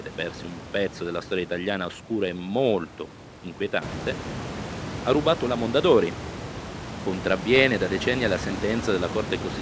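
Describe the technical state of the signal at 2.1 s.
At 2.1 s the speech signal is intact, with no fault present, the room noise and the band-limited call path with nothing above 8 kHz both working as they should.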